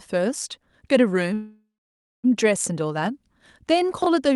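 From 1.33 to 2.26 s there is a call audio freeze. The last sound smears into a fading buzz or hiss, then 0.57 s of silence. Delayed packets likely drained the jitter buffer. Speech resumes where it stopped, with nothing lost.

From 4.02 to 4.06 s, chunks play out of order. A 20 ms chunk plays one chunk late. The speech jumbles briefly at the hard joins.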